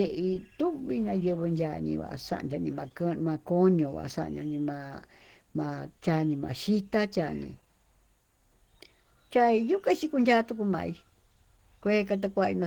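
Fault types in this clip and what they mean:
Low-bitrate audio saved at a high bitrate: first-pass coding damage persists throughout, likely Opus near 16 kbit/s re-saved as 192 kbit/s MP3; the 20.2 kHz ceiling hides the low origin.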